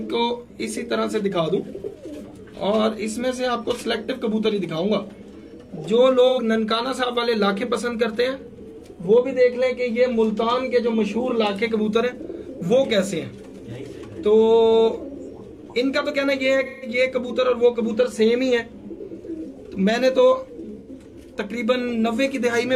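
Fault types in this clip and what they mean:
AAC frame loss with concealment: Missing frames are rebuilt from the last good spectrum. Brief smeared patches appear near 6.28, 16.65 and 20.79 s.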